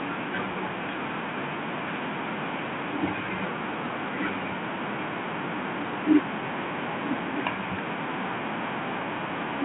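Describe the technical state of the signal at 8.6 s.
At 8.6 s the speech is intact, carried through the narrowband telephone path with nothing above about 3.8 kHz, as throughout that channel.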